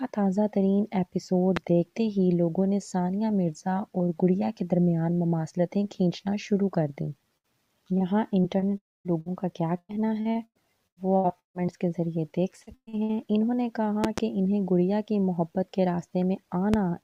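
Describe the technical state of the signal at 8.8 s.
At 8.8 s the signal sits inside a stretch of repeated packet loss (robotic sound), from 7.37 to 11.79 s. Short holes keep appearing, each patched by stretching the previous sound. About a fifth of the span is concealed, giving choppy audio with pieces missing.

Within it, from 8.78 to 9.07 s, the sound stops arriving entirely. The last fragment is held as a fading buzz or hiss, then about 230 ms of silence follows. Audio resumes with that portion gone. The likely cause is a long network dropout.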